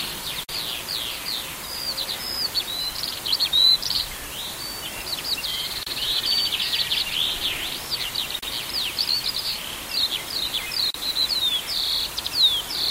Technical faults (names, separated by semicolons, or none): gap at a join of encoded pieces